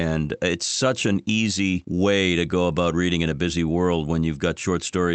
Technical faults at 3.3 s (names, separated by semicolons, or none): none